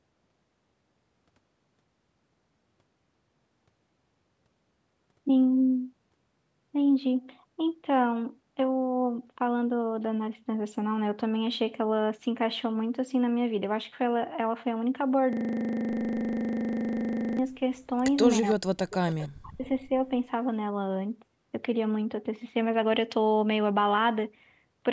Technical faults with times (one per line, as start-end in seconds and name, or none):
15.33-17.39 system hang loop
18.42-18.55 echo leak
18.54-18.68 speech suppressed in double talk
18.90-19.29 echo leak
19.39-19.65 speech suppressed in double talk